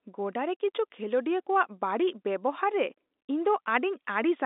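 No technical faults can be heard in the speech, which carries the expected narrow band of an ordinary G.711 telephone line, roughly 250 Hz to 3.7 kHz with nothing above 3.8 kHz.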